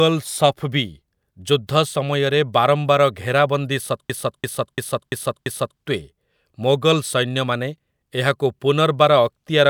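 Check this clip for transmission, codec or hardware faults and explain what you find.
One fault is present: a system hang loop. From 4.10 to 5.80 s, right after "ବାରମ୍ବାର ଘେରାବନ୍ଦୀ", the system froze while the sound hardware kept replaying one buffer. A 341 ms piece repeats five times, at 2.93 Hz. That fits a 16384-sample buffer. It sounds like a slow, mechanical stutter. Little or no audio seems lost.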